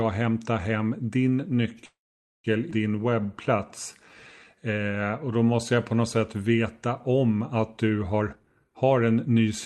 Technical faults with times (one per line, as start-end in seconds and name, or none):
1.85-2.46 call audio freeze
2.70-2.73 skip ahead
2.95-5.96 jitter buffer slow-down
8.20-9.48 jitter buffer speed-up